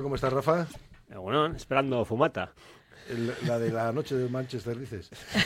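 At 0.67 to 0.76 s, damaged data in the compressed stream garbles about 95 ms. The decoder misreads the corrupted frames and hunts for the next valid header, producing a brief chirp, squawk, click or short hole. On a spectrogram, a narrow vertical break interrupts the surrounding texture.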